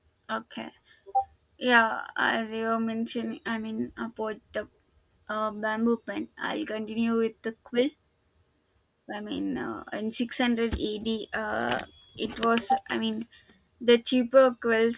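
Listening through this speech recording, nothing technical stood out as wrong at any point.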